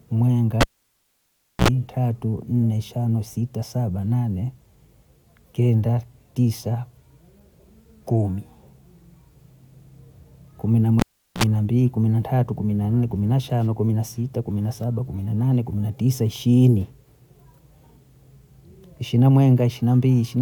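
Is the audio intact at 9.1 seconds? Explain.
Yes, at 9.1 seconds the speech plays through intact, with no dropout, glitch or other fault to be heard.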